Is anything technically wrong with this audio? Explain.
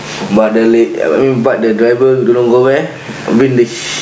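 Yes. Gain pumping runs throughout. The gain ducks by around 15 dB under loud speech, likely from excessive microphone gain hitting a fast limiter.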